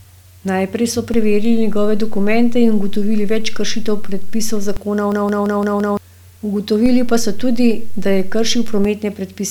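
A DC step at 1.14 s shifts the waveform's zero line, the kind of jump a converter recalibration or an offset input being switched in produces. It is heard as a low thump, and the offset persists under the speech until 4.77 s.

A system hang loop runs from 5.12 to 5.97 s. The host stalled while the audio hardware kept replaying its ring buffer, so a 171 ms slice, which fits an 8192-sample buffer, repeats five times at about 5.9 Hz as a machine-gun stutter. Roughly a second of the real audio is lost.

A second DC step begins at 6.86 s with another low thump. The zero line stays displaced beneath the speech until 8.85 s.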